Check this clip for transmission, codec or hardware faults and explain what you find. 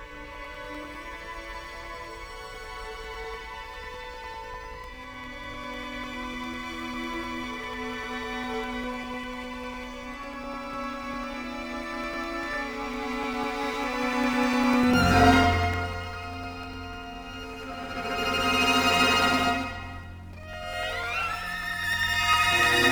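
Periodic USB or driver dropouts run from 0.15 s to 22.84 s, recurring every 0.1 s, about ten times a second. At each interval something stalls the USB link or the audio driver, and roughly 2 ms of signal is lost and filled with silence. Across the clip that adds up to around two hundred tiny gaps. Each abrupt cut to silence and back produces a tick, heard as a steady clicking rhythm whenever sound is present.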